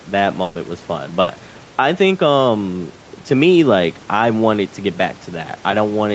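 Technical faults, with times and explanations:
Throughout: gain pumping. The gain ducks by a few decibels under loud speech, likely a fast limiter reacting to excessive input gain.
0.43–0.58 s and 1.21–1.30 s: burst of packet loss. Lost packets were concealed by extending and fading the preceding sound, about 120 ms then 60 ms, before speech resumes with that audio missing.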